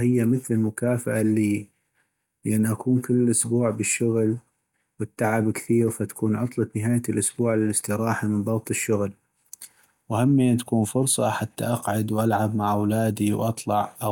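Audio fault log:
None found: the speech recording has no fault to log. There is nothing here that needs a time or a name.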